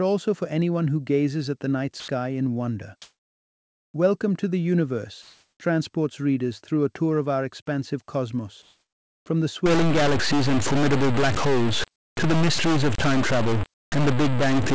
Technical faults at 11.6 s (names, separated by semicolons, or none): stuck bit